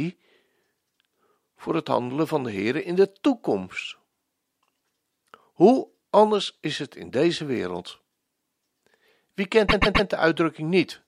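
At 9.68 s, repeated frames cause a stutter. A 130.6 ms block of compressed audio plays three extra times, through 10.07 s. The repeats add 391.8 ms.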